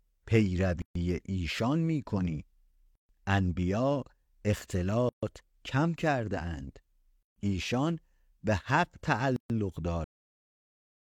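Gaps at joins of encoded pieces fall at 0.82, 2.95, 5.09, 7.23 and 9.36 s, each a gap of about 136 ms with smeared edges. Separately encoded segments of about 2 s were joined with their encoder delay and padding left in, so the speech stops briefly and then resumes where it left off. A cut-off end at 10.04 s drops the speech straight to digital silence with no decay, because the final stretch of audio was never written out.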